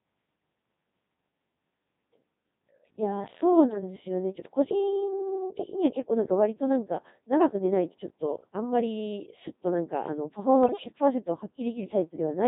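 A speech recording that has been squeezed through the Codec 2 vocoder for its whole length, at a very low rate whose texture fits the 2.4 kbit/s mode. The decoder discards the waveform and rebuilds the voice from sine waves using only pitch, voicing, energy and a rough spectral envelope. Heavy codec damage results: the speech sounds robotic and buzzy, with a synthetic tone throughout. On top of this come two bursts of bit errors on digital voice radio, from 3.68 to 3.82 s and from 10.64 to 10.84 s. Flipped bits corrupted the parameters of several consecutive frames, roughly a few percent of bits in the first burst and somewhat more in the second, judging by how badly they break up. Since each bit steers the pitch, level, voicing or spectrum of a whole frame, the voice lurches in pitch and loudness and dissolves into warbling, bleep-like robotic gibberish. The second, longer burst is the more disruptive of the two.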